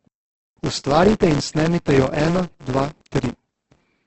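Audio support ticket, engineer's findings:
Filter state reset at every block boundary, throughout. Startup transient each block gives a level-following buzz at 172 Hz, which fits a 256-sample block.

Likely Opus compression in CELT mode, throughout, at what sounds like a very low bitrate. Nothing above 8.2 kHz; the speech is heavily grainy, rough and noise-filled.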